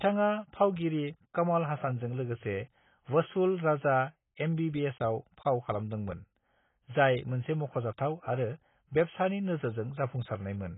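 Throughout, AAC compression is likely: the speech has nothing above 3.8 kHz and sounds dull, smeared and warbly, which fits heavy quantisation at around 16 kbps.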